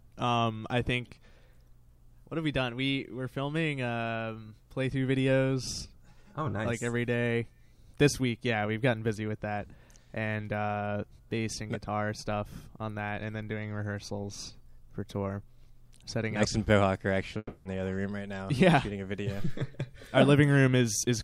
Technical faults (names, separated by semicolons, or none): long network dropout